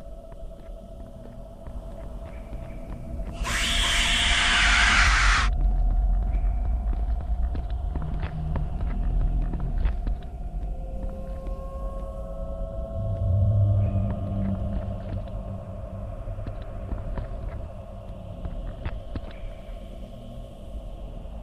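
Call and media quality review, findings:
Doubled audio track, 1.70–5.08 s. Full-band copy trailing around 400 ms behind at roughly equal level; no decay or room colour; hard on/off edges. Likely a second, slower capture path mixed in. Waveform: each onset repeated after a fixed gap. Spectrogram: every event duplicated, shifted right, identical in shape and brightness.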